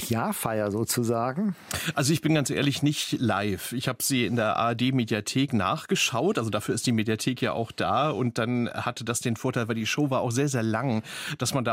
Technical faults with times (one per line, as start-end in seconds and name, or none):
none